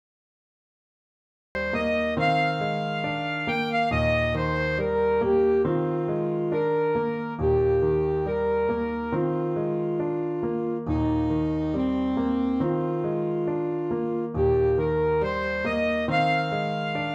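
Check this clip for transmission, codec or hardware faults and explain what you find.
There is one fault, a cut-off start at 1.55 s. The first 1.55 s are digital silence, and the sound then begins abruptly at full level in the middle of an ongoing event. This happens when a recording or stream is captured late, so whatever was already under way is sliced off rather than rising in naturally. There is no attack or fade-in, only a hard edge where silence gives way to sound already in progress.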